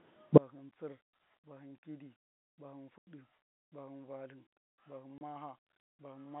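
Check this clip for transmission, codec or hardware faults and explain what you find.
Two faults affect this speech clip: a collapse in level from one inverted channel, and two silent gaps from packet loss.

From 0.38 s to the end, the speech drops by about 33 dB to a faint residue. The likely cause is one channel inverted: with reversed polarity, the centred voice cancels when the channels are summed to mono. A dropout or fader move would lower everything evenly rather than leave this residue.

At 2.98 to 3.07 s (90 ms) and 5.18 to 5.21 s (30 ms), the audio cuts to dead silence with hard edges. This is packet loss filled with silence. Both gaps are multiples of 10 ms, which fits 10 ms packets. Concealment would smear or repeat sound, but here the holes are empty.

The telephone band of about 150 Hz to 3.5 kHz comes from the G.711 coding, which is working normally.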